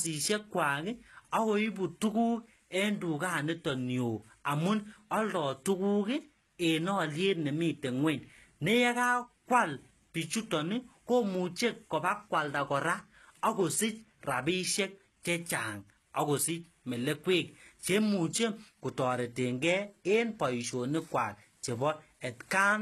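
HE-AAC compression, likely, runs throughout: treble above 12.4 kHz is gone, and the remaining highs, rebuilt from copied lower bands at what sounds like about 16 kbps, leave s sounds gritty and metallic.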